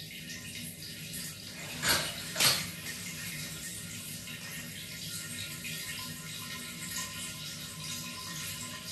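A recording of sounds with a regular click or pop roughly every 1.14 s, running from about 0.2 s to 8.16 s. Those are clock drift buffer slips, likely from two devices on separate clocks disagreeing by around a thousand parts per million, so a few dozen samples get dropped or repeated each time.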